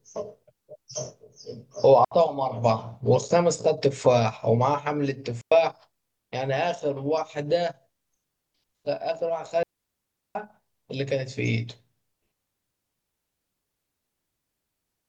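Three digital wireless dropouts break the speech, at 2.05 s for about 69 ms, at 5.41 s for about 106 ms, and at 9.63 s for about 720 ms. Each time the link lost too much data, so the receiver muted. The sound drops into clean near silence. No noise burst surrounds the holes.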